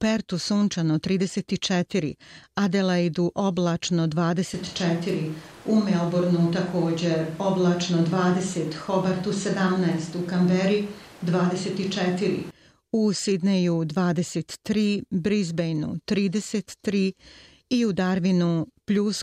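A switch to a distant microphone runs from 4.54 s to 12.5 s. The speech suddenly turns roomy and hollow, with thinner bass and background noise rising to roughly 25 dB below the speech, while the overall level stays about the same. The likely cause is that the close microphone's signal dropped out and a farther pickup, capturing more of the room's reflections, took over. At 12.5 s the close, fuller sound returns just as abruptly.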